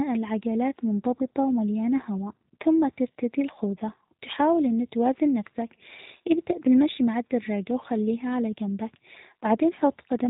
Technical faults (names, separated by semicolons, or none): G.729 codec